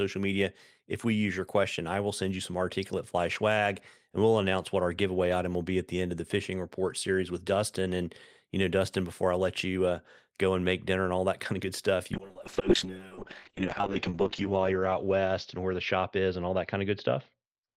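At 12.16 s, after "of good stuff you", a call bitrate drop makes the speech rough and muffled, cut off at 8 kHz, until the end. This fits a fall from 32 to 6 kbps. Unlike packet loss, the sound never drops out.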